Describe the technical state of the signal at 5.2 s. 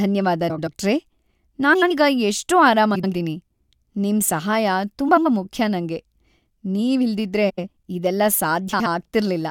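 At 5.2 s the speech sits inside a frames-out-of-order fault running from 5.08 to 5.26 s, just before "ಮುಖ್ಯ ನಂಗೆ". Two adjacent blocks of about 85 ms each, which fits two runs of four frames, were decoded swapped, so the stretch plays with its halves exchanged and no time is lost. It sounds like a garbled flutter. A spectrogram shows formant tracks breaking and jumping at each join.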